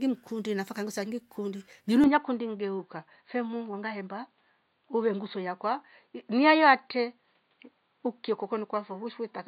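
At 2.04 s, after "mkundi nafa kangusangi kundi", the speech abruptly turns dull, with nothing above 4.6 kHz: likely an input switched to a poorer device.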